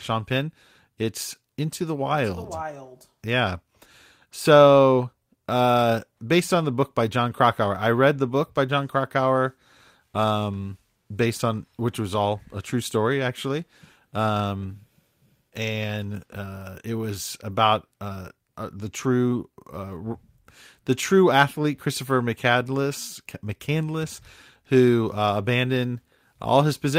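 No technical faults can be heard anywhere in the recording; the signal stays continuous and steady from its opening moment to its close.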